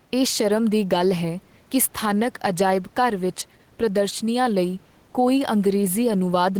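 Speech with gain pumping throughout: the room noise, sitting about 36 dB below the voice, swells up in each pause and ducks by roughly 5 dB under every loud syllable, likely from input gain set far too high with a fast limiter clamping it. Unlike a noise gate, the background never cuts out; it breathes up and down with the speech.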